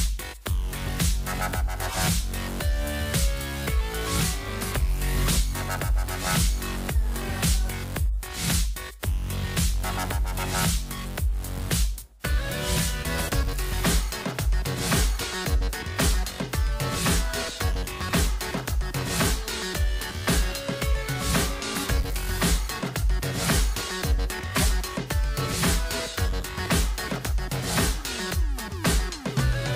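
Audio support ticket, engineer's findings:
Corrupt frame decoded: short chirp/noise bursts at 1.89–1.96 s, 6.77–6.86 s, 24.51–24.66 s and 25.99–26.04 s, each roughly one to a few codec frames long. Error peaks are about −20 to −10 dBFS, loudest at 24.5 s. The decoder played frames containing flipped bits, so misread gains and codes put energy at the wrong frequencies. Unlike a dropout or concealed frame, foreign energy replaces the frame's content.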